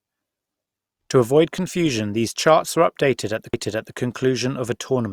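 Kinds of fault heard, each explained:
CD skip: a knock or disc flaw threw the laser onto another turn of the spiral, so the player muted for only a couple of milliseconds and resumed elsewhere, giving a tick near 3.53 s, right after "confusion these charts are", and an abrupt jump in the speech.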